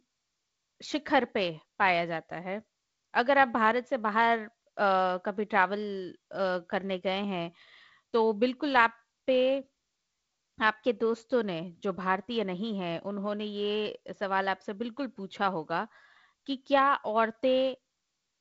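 Nothing stood out on listening to this speech recording, which comes through G.722 wideband telephone coding.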